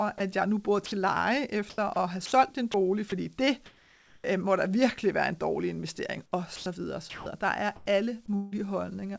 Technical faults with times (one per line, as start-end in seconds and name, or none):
0.18 sound dropped by the voice detector
0.86-0.92 sound dropped by the voice detector
1.70-3.12 sound chopped by the voice detector
3.66-4.24 comfort noise in place of the background
6.56-8.54 sound chopped by the voice detector